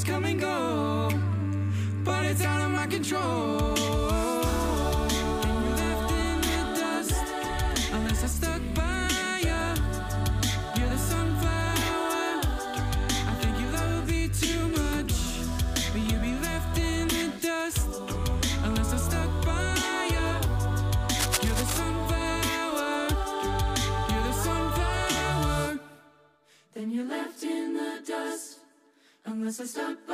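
At 21.19 s a burst of cable scratch noise begins and runs to 21.77 s: a dense, irregular rasp sitting only a few decibels below the sound itself. The likely cause is a worn cable or connector being moved, its contact resistance fluctuating rapidly.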